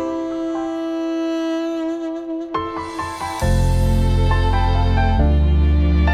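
Nothing here trips the ear: no dropouts, glitches or distortion turn up anywhere in the recording, so there's really nothing to flag.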